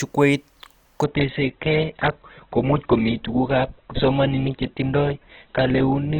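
At 1.04 s the speech switches abruptly to an adaptive stream at a lower bitrate and stays there to the end. The player fell back to a leaner version of the stream when the connection slowed, and the quality fits a drop from about 64 kbit/s Opus to about 8 kbit/s. Nothing remains above 4.2 kHz, and codec artefacts thicken. Unlike a dropout there is no gap, and unlike a plain filter the thinning arrives as a sudden step with added coding artefacts.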